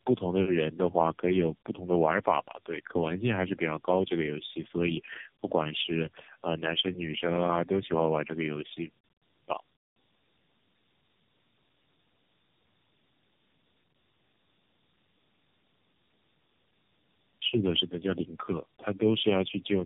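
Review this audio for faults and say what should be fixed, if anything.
Tandem speech coding runs throughout: the speech was decoded and re-encoded at each network border, which points to three passes through a low-rate AMR-style codec. Each pass compounds the last, leaving the speech rough, muffled and warbly, with nothing above 3.7 kHz. To prevent it, carry the codec end to end with transcoder-free operation instead of decoding at every link.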